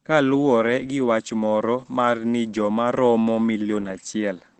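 Opus voice compression affects the whole speech clip. Nothing remains above 8.5 kHz, the wideband limit of its SILK linear-prediction mode. Coarse coding of the excitation makes the speech plainly muffled, hoarse and slightly robotic, which fits a bitrate near 12 kbps.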